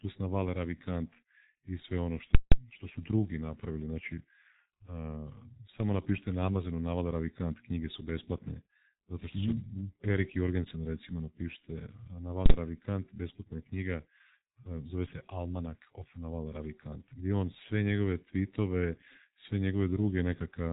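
Throughout, the speech carries heavy G.723.1 codec damage: nothing above 3.8 kHz, a muffled, hoarse tone and smeared consonants, which fits a roughly 6.3 kbit/s stream with 30 ms frames. Unlike simple low-pass filtering, the slowly updated voice model also roughens the voicing itself.

From 2.35 to 2.52 s comes invalid numbers at full scale. A calculation produced invalid values that were pinned at one extreme, so the output sits flat for about 0.17 s, which fits an 8192-sample block. It is heard as a loud pop at each edge with silence between. A dropout would be silent without the pops, and clipping would still let sound through.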